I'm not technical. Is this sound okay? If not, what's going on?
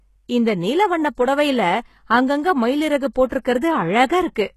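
No. Throughout, the speech has gritty, metallic high sounds, and nothing is heard above about 12.3 kHz. That points to HE-AAC compression as the likely cause. It keeps the low part properly but fakes the treble by copying lower sounds upward.

There is also a pre-echo from 3.26 to 3.32 s, right after "வண்ண புடவைல அங்கங்க மயிலறகு". A short hiss arrives about 57 ms before a sharp sound starts. The compressor spreads its noise across a small chunk of time, so some lands before the sound itself.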